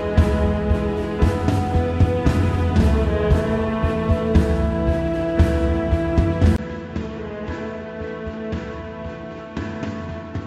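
At 6.56 s a 20 ms gap gives way to quieter audio cut off above 7.6 kHz with faint new background noise. This is likely an input switched to a poorer device, not mere filtering.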